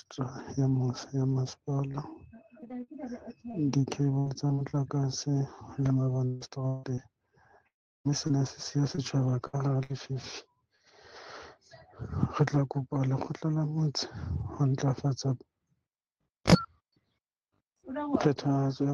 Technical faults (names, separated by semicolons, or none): repeated packet loss (robotic sound); long network dropout; scattered short gaps